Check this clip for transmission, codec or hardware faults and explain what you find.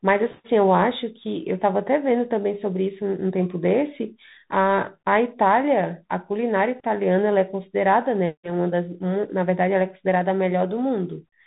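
The speech has a Bluetooth CVSD headset codec fault for its whole length. The sound is dull and boxed in, with nothing above about 3.8 kHz, scratchy s sounds and a grainy hiss beneath the voice. CVSD codes each sample as a single up-or-down bit, which fits a 64 kbit/s stream. Its adaptive step can't keep pace with sharp high-frequency swings, so the damage is plainly audible.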